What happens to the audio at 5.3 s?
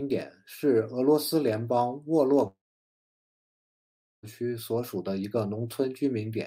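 Nothing goes wrong at 5.3 s: the speech plays through that moment with no dropout, click, distortion or other fault.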